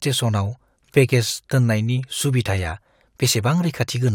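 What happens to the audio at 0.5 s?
At 0.5 s the speech runs on cleanly, with no dropout, click, distortion or other fault at that moment.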